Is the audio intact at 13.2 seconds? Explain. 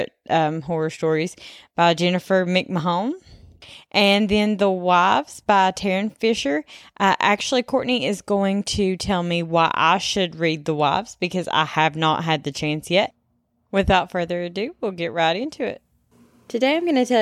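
Yes, the audio is intact at 13.2 seconds, with no dropout, glitch or other fault at that moment.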